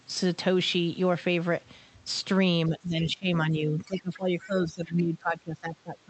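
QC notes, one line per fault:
2.67–3.27 s and 3.46 s to the end: speech suppressed in double talk. The voice sinks and thins, by about 15 dB over roughly half a second, then by about 20 dB to the end, likely the echo canceller ducking the talker while the far side spoke.
4.41–4.45 s: other side's voice leaking through. A brief scrap of a second voice surfaces about 25 dB below the talker, likely residual loudspeaker echo the canceller failed to remove.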